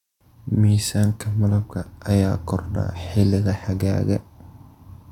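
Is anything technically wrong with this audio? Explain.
No, nothing is technically wrong with this audio.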